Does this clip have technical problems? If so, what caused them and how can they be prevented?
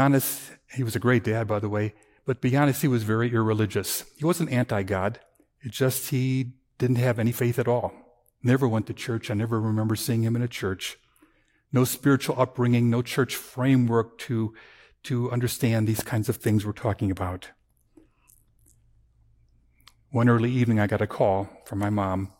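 Yes. A loud pop at 15.99 to 16.01 s, after "framework to to understand" and before "kinds of things we're", jumps about 10 dB above the speech, likely from a voltage spike from a plug, switch or static discharge. To prevent it, secure connections, avoid switching or handling gear while recording, and ground equipment properly.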